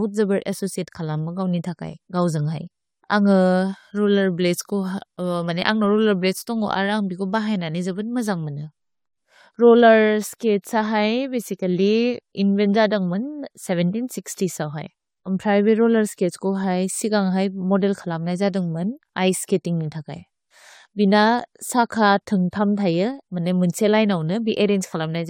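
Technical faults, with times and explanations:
throughout: generation loss. The speech sounds swirly, hollow and smeared, with consonant attacks softened, more than a single encode would leave. The likely cause is about three rounds of lossy coding, consistent with AAC-LC near 96 kbit/s. Each round quantises on a shifted frame grid, so noise and gaps accumulate. A spectrogram shows a hard ceiling at 19.3 kHz. The waveform shows smeared onsets.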